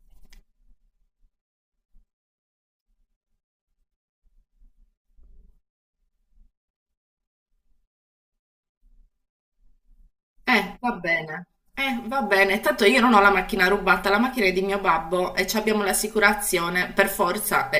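Speech with channel delay (comb filtering) throughout: one channel lags roughly 5 ms before mono summing, cutting notches from about 100 Hz upward, seen as evenly spaced horizontal spectrogram stripes.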